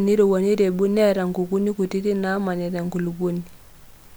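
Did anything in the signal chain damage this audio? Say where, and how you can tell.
No, nothing in the chain from capture to playback audibly damaged this speech recording, and the signal stays continuous and stable throughout.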